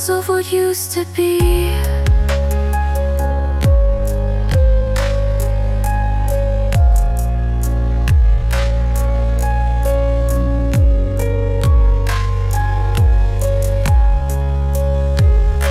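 A time-stretched section runs from 3.14 s to the end of the clip, where the pace abruptly drops to half speed while the pitch holds steady. The likely cause is software lengthening that stretch of audio to fill a set duration, keeping pitch constant by repeating short slices of the waveform rather than simply playing it slower. As a result, the slowed sound drags.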